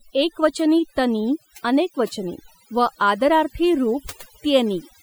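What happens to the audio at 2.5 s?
Overdone noise removal is at work at 2.5 s, as it is for the whole clip rather than starting at that moment. A noise reduction stage set far too aggressively is pushing individual frequency bands down or out whenever their level sits close to its noise estimate, and the softer parts of the speech are being caught and removed along with the noise. The background in the gaps drops and breaks up into twinkling, warbling specks.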